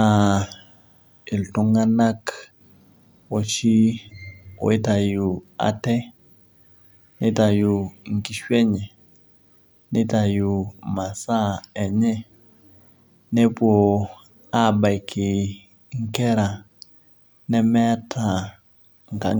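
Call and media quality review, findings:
No faults found in the speech recording. Nothing heard warrants a ticket entry.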